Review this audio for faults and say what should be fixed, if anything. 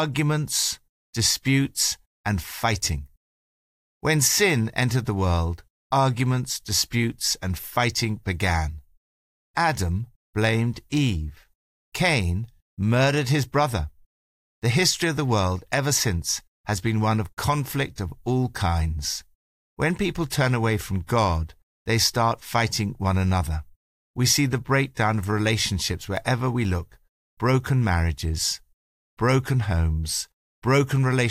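Nothing here needs fixing; I listened through and didn't hear a single technical fault anywhere in the recording.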